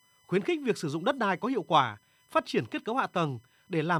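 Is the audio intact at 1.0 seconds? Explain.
No. At 1.0 seconds, as through the whole clip, a steady, fixed-pitch whine sits well beneath the speech, roughly 40 dB down, built on a 1 kHz tone and loudest at its third harmonic, 3 kHz. This is USB whine: the bus draws current in regular 1 ms frames, and that pulsing load leaks into the audio path through shared power or ground, stamping its 1 kHz rate and multiples onto the signal.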